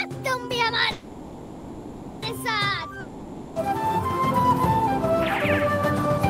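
From 0.91 to 2.24 s there is a call audio freeze, most likely because packets were held up in transit and the jitter buffer ran dry. With nothing new to play, the receiver stretches the last sound into a fading buzz for about 1.3 s. When the packets arrive, playback resumes exactly where it stopped, so nothing is lost. Instead, a gap has been inserted, and everything after it now plays about 1.3 s later.

At 3.00 s a long network dropout begins and lasts until 3.58 s. Here the likely cause is that audio stopped arriving altogether and those packets were never recovered. The receiver again fills the hole by carrying the last sound on as a decaying buzz. This time about 0.56 s of real audio is gone, so when sound returns at 3.58 s it comes back further along, with that stretch cut out.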